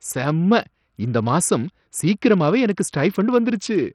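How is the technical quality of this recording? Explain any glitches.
The quality is poor. Heavy codec damage runs through the whole recording.

Throughout the speech, the sound has likely been through Bluetooth SBC compression. The treble flickers and stops near 16 kHz. Gritty noise and aliasing ride on every phrase. SBC splits audio into a few wide bands. At a small bit pool, the top bands starve and the rest quantise coarsely. The damage points to a low bitrate, around 64 kbps.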